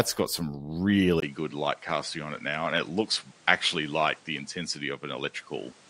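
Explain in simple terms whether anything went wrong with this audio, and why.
At 1.2 s, right after "got some", the speech briefly drops out and then sounds duller and hissier until the end. This is likely an input switched to a poorer device.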